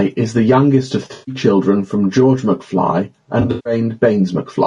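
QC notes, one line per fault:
Throughout, gain pumping: the level swings by about 10 dB, ducking under louder syllables, likely from excessive input gain driving a fast limiter.
Throughout, low-delay AAC compression: rough, grainy speech with noise between harmonics and a thin, synthetic top, likely from AAC-ELD short frames at a bitrate around 32 kbps.
1.13–1.35 s, AAC frame loss with concealment: after "is the youngest of", a smeared, noisy patch of about 140 ms, filled from the previous spectrum, before "children from".
3.41–3.73 s, AAC frame loss with concealment: repeated noisy, phasey gaps totalling 200 ms over 240 ms, the longest around 150 ms, as concealment repeated stale spectra.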